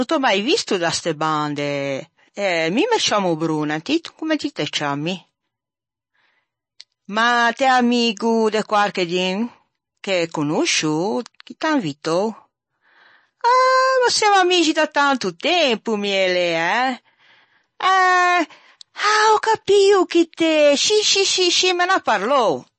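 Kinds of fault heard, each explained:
MP3 compression: The speech sounds watery and swirly throughout, with metallic chirping on s sounds and softened, smeared consonant onsets, and nothing is left above 8.3 kHz. The likely cause is low-bitrate MP3 encoding, with damage that fits a rate of roughly 32 kbps: short of bits, the encoder cut the treble at a fixed point and dropped weaker frequency lines, which then flicker on and off from frame to frame.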